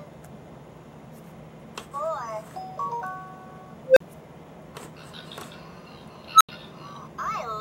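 An unstable filter, where bad coefficients let a recursive filter grow without limit, strikes twice. At 3.85 to 4.00 s, a tone near 500 Hz swells over 115 ms, clips, then drops out for 40 ms. At 6.33 to 6.49 s, one near 1.5 kHz builds over 73 ms before 80 ms of silence. On a spectrogram, each is a bright horizontal line ending in a blank gap. The waveform balloons into a squared-off block, then goes flat.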